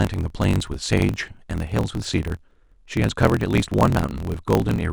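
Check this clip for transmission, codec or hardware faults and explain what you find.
One fault runs through the whole clip: a block size mismatch (truncated). From start to finish a steady buzz sits under the speech at 43.1 Hz, and the speech moves 1.12 times faster than normal while keeping its timbre. The buzz rate fits a stage reading 1024-sample blocks from one that writes longer ones. The tail of each written block is discarded, so every block boundary leaves a jump that repeats as a buzz, and the dropped audio shortens the timeline.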